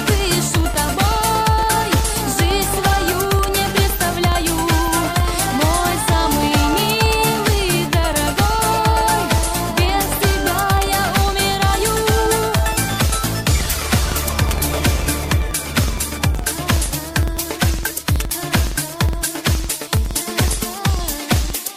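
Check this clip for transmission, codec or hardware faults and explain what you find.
One fault runs through the whole clip: a filter restarted on every block. The filter loses its state at each block boundary and starts from silence, leaving a small transient. At 21.5 Hz, which fits 2048-sample blocks, these form a buzz that follows the sound's level. A spectrogram shows evenly spaced vertical lines, and the waveform shows regular tiny spikes.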